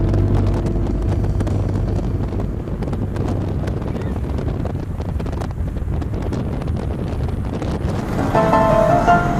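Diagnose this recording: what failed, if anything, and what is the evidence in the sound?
Nothing failed; no faults audible.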